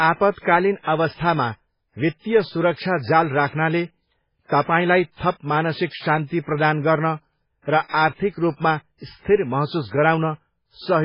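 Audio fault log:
Throughout, MP3 compression: nothing survives above 5.2 kHz, so the speech is dull, with a watery, swirling texture as weak frequency lines drop in and out between frames. This is likely heavy MP3 coding at a very low bitrate, consistent with around 16 kbps. Unlike a simple low-pass filter, the damage also shifts and warbles inside the remaining band.
0.39 to 0.45 s and 2.73 to 2.78 s, pre-echo: a hiss arrives just before a sharp onset, lasting 59 ms the first time and 50 ms the second. The attack itself sounds softened. The codec spreads quantisation noise across a whole transform block, so noise sized for the loud attack leaks into the quiet moment before it. Unlike a click or dropout, this is a smeared hiss that runs just ahead of the onset.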